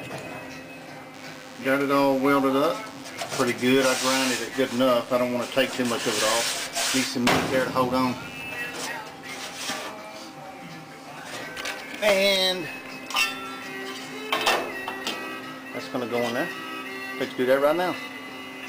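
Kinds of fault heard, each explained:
DECT cordless phone buzz: a steady, thin buzz at 100 Hz, rich in harmonics, runs from 1.1 to 8.4 s at roughly 20 dB below the sound. A nearby DECT handset or base transmits a radio burst every 10 ms, which the audio circuitry rectifies into this buzz.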